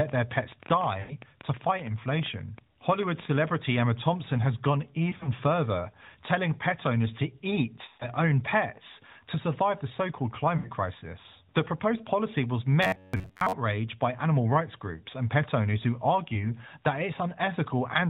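Lost AMR speech frames come first, at 1.00 to 1.16 s (about 100 ms gone), then scattered through 5.10 to 5.34 s (about 60 ms in runs no longer than 20 ms), then 7.88 to 8.09 s (120 ms) and 10.58 to 10.71 s (60 ms). In each case the decoder stretches the last good pitch and vocal tract shape while the gain falls. The longer gaps smear and fade toward silence, the scattered ones only dip or warble, and the speech returns thin before recovering.

From 12.83 to 13.53 s comes robotic sound from repeated short buffers. Over most of that stretch, slices of roughly 10.7 ms repeat, likely from audio arriving too seldom. This stamps a rigid 93.8 Hz metallic buzz onto the speech. Unlike the frame losses, it never fades: the buzz holds a fixed rate while the contour loosely tracks the speech.

A single lost frame at 16.34 to 16.46 s produces a brief dip, all within the 4 kHz ceiling of the narrowband AMR codec.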